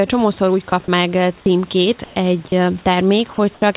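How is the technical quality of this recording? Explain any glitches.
Short gaps of steady noise break into the speech several times, and one stretch of background turns flat. The whole clip is band-limited, with nothing above 4 kHz, which fits a G.711 call codec.

Sound dropped by the voice detector occurs four times: 0.70 to 0.72 s, right after "csomószor úgy", then 1.40 to 1.46 s, 2.48 to 2.52 s and 3.54 to 3.62 s. The sender likely judged these bits of speech to be background and stopped sending. The receiver filled the gap with synthetic noise. Between 20 and 50 ms of real sound goes missing each time. You hear a brief hiss where speech should be.

Comfort noise in place of the background appears from 2.04 to 2.16 s. Here the speech pauses. The sender likely went quiet during the pause and sent only a noise description. The receiver played generated noise for 120 ms. The room noise sits about 30 dB below the speech. 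The substitute comes in about 2 dB off that level. It sounds smooth and featureless, without the texture of the room.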